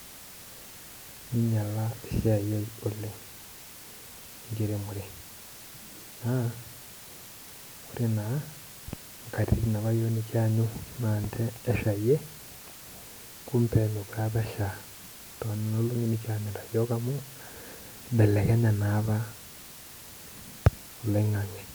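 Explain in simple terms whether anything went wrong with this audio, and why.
A steady, even hiss runs under the speech throughout, with no crackle: low bit depth with dither, which fits audio stored with only 7 bits.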